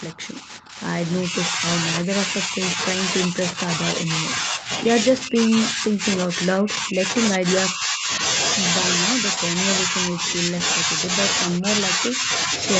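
The speech dips in five stretches: 0.12 to 0.78 s, 1.23 to 4.7 s, 5.23 to 8.11 s, 9.15 to 11.0 s, and 11.58 to 12.52 s. The level falls by about 10 to 20 dB. The deepest drop comes between 5.23 and 8.11 s. Within each stretch, parts fade, thin out or break off. The likely cause is speech suppressed in double talk. The echo canceller confuses the talker with echo while the far side speaks, and turns both down.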